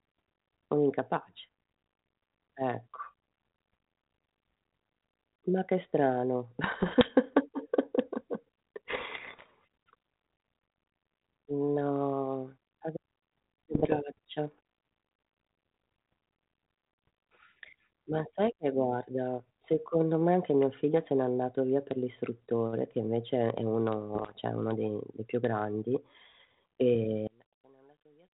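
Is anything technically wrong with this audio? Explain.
Yes. There are two faults.

Bit errors on an ADPCM link occur at 6.64 to 7.11 s, just after "che strano", at 8.88 to 9.46 s, at 13.74 to 13.94 s, and at 24.14 to 24.33 s, after "l'istruttore che invece è". Roughly 0.7 to 1 percent of bits are corrupted. Each flipped bit throws off the decoder's step size and prediction, so the error lingers briefly. The result is pops, rough bursts and short jumps in level.

From 27.27 s to the end, the speech drops by about 33 dB in mono. It turns faint. The likely cause is one channel inverted. Reversed polarity on one side makes the shared centre content cancel when the channels are summed.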